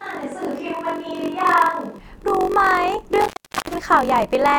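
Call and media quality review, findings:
Steady 46.9 Hz buzz throughout; speech runs slow, about 0.938 speed, timbre unchanged. Block size mismatch (padded): short writes zero-filled into what fits a 1024-sample read block.

0 to 1.98 s, already under way at start: roomy, hollow, thin, about 5 dB quieter, room noise roughly 40 dB below speech, then abrupt return to close sound. Likely switch to a distant microphone.

3.21 to 3.75 s: crackle, then about 0.36 s dropout to faint hiss, crackle on return. Intermittent contact in a cable or plug opening the line.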